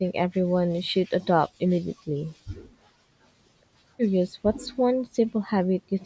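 The speech dips or drops out in short pieces at 0.87–1.1, 1.51–1.58, 1.8–1.9, 2.27–2.45, 2.67–3.19, 4.61–4.76, 5.09–5.33 and 5.79–5.91 s. The drops range from about 10 to 40 dB and are deepest near 1.8 s. This is likely speech suppressed in double talk: the echo canceller heard both sides at once and turned this talker down along with the echo.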